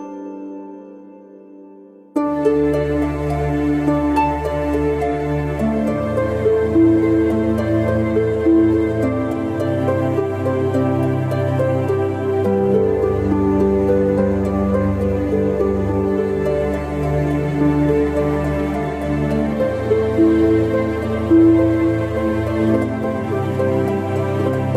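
No technical faults can be heard in this audio at any point.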